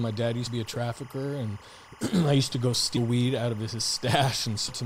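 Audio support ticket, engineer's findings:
Timecode bleed, throughout: steady chirping warble well below the speech, toggling near 1 and 2 kHz. LTC at 25 frames/s leaking from an adjacent track or cable.

Compressed frames skipped, 0.46–0.51 s, 2.96–2.99 s, 4.68–4.72 s: short glitches where speech jumps ahead roughly 100, 100 and 150 ms. Fits whole 10 ms frames missing or rejected by the decoder.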